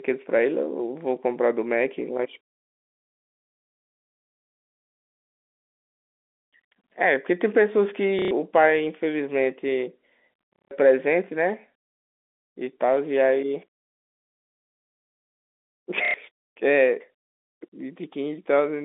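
Packet loss with last packet repeated at 8.19–8.31 s, 10.53–10.71 s and 16.05–16.14 s: the receiver replays the previous packet, causing robotic stutters that buzz near 33 Hz, which fits 30 ms packets.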